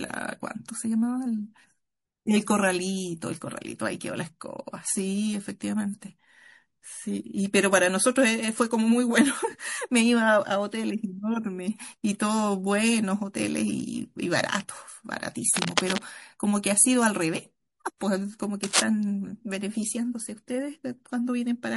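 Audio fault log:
Throughout: MP3 compression. The speech sounds watery and swirly, with metallic chirps on s sounds and smeared attacks, which fits a starved bitrate around 48 kbps. The encoder likely cut the treble at a fixed point and dropped weak frequency lines that flicker between frames.
15.54 to 16.03 s and 18.63 to 18.82 s: cable scratch noise. Dense, uneven bursts of scratching rustle over the speech. The first is a little below the speech level and the second is about as loud as it. This is likely a worn cable or connector being moved, so its contact resistance jumps rapidly.
17.98 to 18.01 s: pre-echo. A hiss about 25 dB above the quiet before it runs for 34 ms ahead of a sharp attack, and the attack itself sounds soft. Quantisation noise spread across a long transform block, which fits about 48 ms with no switch to short blocks, filled the silence before the onset.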